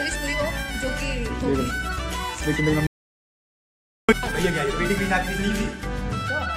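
The audio cuts out abruptly at 2.87 s and returns at 4.09 s, an audio dropout to silence. The gap lasts about 1.22 s. It is silent, with no room tone or noise floor underneath. The sound stops mid-flow and resumes mid-flow, so whatever happened in that stretch is simply missing. The likely cause is a momentary loss of the input signal, such as a dropped connection or a brief mute, while recording carried on writing empty samples.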